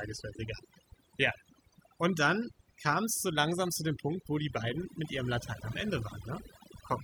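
A speech recording with overdone noise removal throughout: the pauses sink to near silence flecked with twinkling specks. Unlike a noise gate, which mutes everything at once, individual frequency bands switch off separately, taking quiet speech detail with them.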